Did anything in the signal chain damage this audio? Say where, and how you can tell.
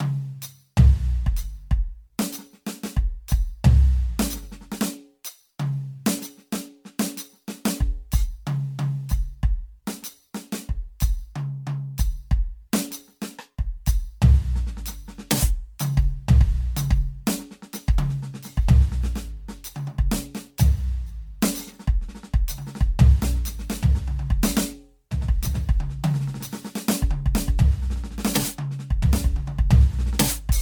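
Yes. The damage sits at the codec stage and runs through the whole music clip. This is generation loss. The sound is swirly and hollow, with smeared, blurred attacks. That is worse than a single lossy pass at this quality would give. The likely cause is about seven rounds of MP3 decoding and re-encoding near 100 kbit/s. Each pass quantises again on a shifted frame grid. Noise and spectral holes pile up with every generation.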